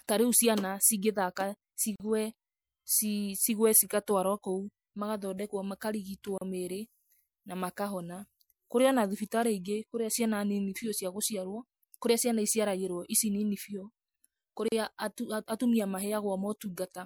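A speech clip with three gaps at a join of encoded pieces: short silences at 1.96 to 2.00 s (about 43 ms), 6.38 to 6.41 s (35 ms) and 14.68 to 14.72 s (37 ms). Each cuts the speech abruptly, with edges smeared by the codec, and the sound resumes where it stopped. Separately encoded segments were concatenated without trimming, so each encoder's start-up delay and final-frame padding remain as dead air at the seams.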